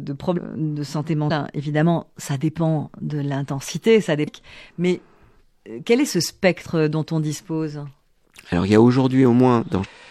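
Damaged data in a compressed stream hits at 0.33–0.39, 4.23–4.28 and 9.80–9.87 s: the decoder misreads corrupted frames and loses sync, giving brief glitches in the speech.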